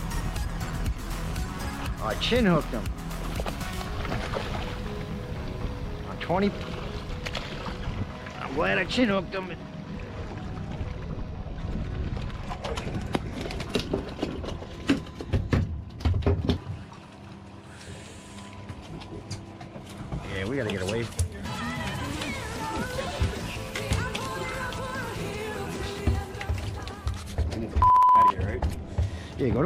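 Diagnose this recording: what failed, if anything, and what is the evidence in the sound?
The failure sits at the driver or buffer stage: periodic USB or driver dropouts. At a fixed interval of about 64 ms, something stalls the USB transfer or the audio driver, and a tiny slice of samples, on the order of a tenth of a millisecond, is skipped. The sound then jumps straight ahead, leaving a small discontinuity. From 0.11 s to 29.56 s this produces several hundred ticks at a steady rate of about 16 per second, audible only where there is signal.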